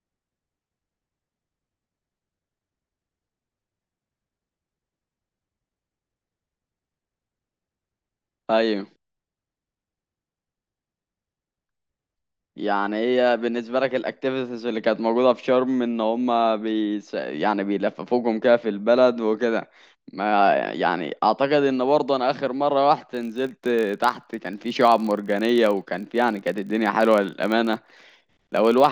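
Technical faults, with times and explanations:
23.13 to 28.92 s, filter restarted on every block: the filter starts each block from silence, leaving a small transient that buzzes at 46.9 Hz, which fits a 1024-sample block, louder as the speech grows louder. The waveform shows evenly spaced spikes, and the spectrogram shows regular thin vertical lines.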